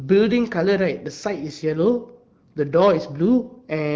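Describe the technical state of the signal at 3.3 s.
At 3.3 s the speech passes through intact, with no fault at that moment.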